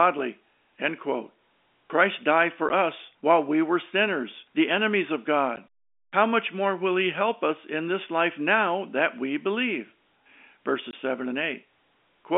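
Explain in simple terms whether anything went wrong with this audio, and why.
A few tiny dropouts, yes. This is packet loss filled with silence: bits of the speech went missing in transit and the receiver just played nothing in their place. You get a 10 ms gap at 2.69 s, another 10 ms gap at 5.56 s, and a 20 ms gap from 10.91 to 10.93 s, which sounds like two chunks lost back to back. Each hole has hard edges, cutting sharply into the narrow, telephone-style sound of the line.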